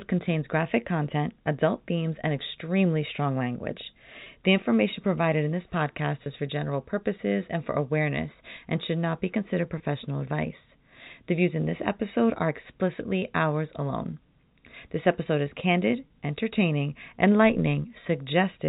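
Packet loss with pitch repetition hits four times: after "and extremely strong language" at 4.24–4.26 s, after "provided in this podcast" at 6.24–6.26 s, after "should not be considered" at 9.78–9.80 s, and at 16.08–16.10 s. Each gap is about 20 ms, which fits one lost packet. The receiver repeats the last pitch period to cover it, so you hear a brief held, buzzy blip, all through the G.711 telephone coding's 4 kHz-limited band.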